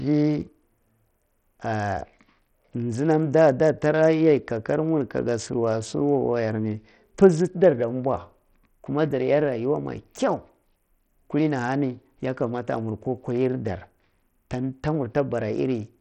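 Throughout, the speech sounds gritty with flickering treble and nothing above 17.2 kHz, likely heavy Bluetooth SBC compression, which fits a bitrate near 64 kbps.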